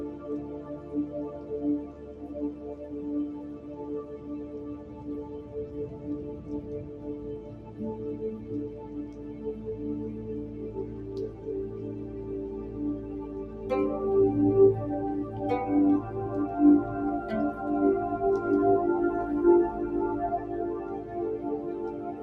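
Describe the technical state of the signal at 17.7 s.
At 17.7 s the noise suppressor applied to music or sounds is active, as it is across the whole clip. A suppressor tuned for speech treats sustained tones and decaying tails as noise and pulls them down by around 10 dB while onsets pass through, so held sound sinks after each attack. Unlike a compressor's pumping, the dips follow steadiness rather than loudness, and unlike codec smearing, transients stay crisp.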